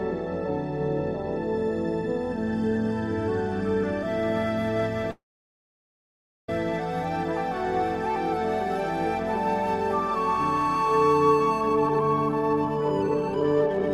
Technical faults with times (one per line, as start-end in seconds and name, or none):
5.11-6.49 call audio freeze
11.61-13.89 jitter buffer speed-up